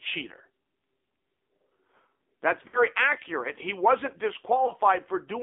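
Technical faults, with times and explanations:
Throughout, AMR narrowband mobile codec: the speech sounds buzzy and synthetic, confined to about 250 Hz to 3.6 kHz. The low 8 kHz sampling removes everything higher, and the sparse pulse-excited vocal-tract model is plainly strained, which fits a low mode near 7.4 kbps.
2.68–2.84 s and 4.66–4.72 s, lost AMR speech frames: the first gap briefly smears and fades, and the second is a quick dip. The decoder repeats its last good pitch and filter settings at falling gain, which fits about three lost 20 ms frames, then one.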